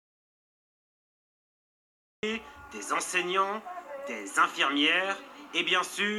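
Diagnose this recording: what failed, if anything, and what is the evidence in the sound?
Audio dropout to silence from the very start to 2.23 s: the clip opens in silence, with no room tone or noise floor, and the sound only arrives abruptly at 2.23 s, mid-flow rather than with a natural onset. The stage is the input path, likely a disconnected or muted source or a failed link ahead of the recorder. The recorder kept writing silence throughout, so whatever occurred during those first seconds is lost.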